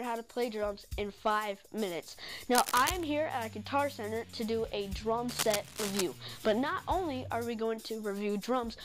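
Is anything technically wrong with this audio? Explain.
Yes. Two bursts of cable scratch noise occur, from 2.53 to 3.04 s and from 5.28 to 6.02 s. Each is a dense, uneven scratching or rustling laid over the sound, only a few decibels quieter than it. The likely cause is a worn cable, connector or control being moved, so its contact resistance jumps about rapidly. On a spectrogram these show as ragged broadband smears across the whole band; in the waveform, as clusters of irregular spikes riding on the signal.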